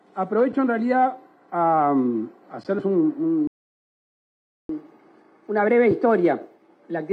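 The audio cuts to silence at 3.47 s for about 1.22 s, a playback stall, likely from the player running out of buffered data or a blocked output thread. From 4.69 s to the end, catch-up at higher speed follows: the sound runs 1.1 times faster, pitch raised roughly a semitone and a half, as the backlog is resampled.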